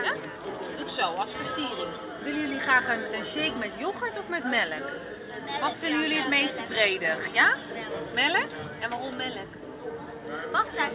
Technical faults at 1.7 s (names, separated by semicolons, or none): none